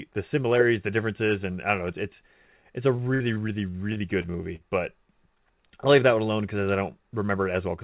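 Just after "it's it's it's a", from 2.96 to 4.62 s, repeated packet loss leaves eight patched gaps up to 60 ms long, making the 4 kHz-limited speech choppy and robotic.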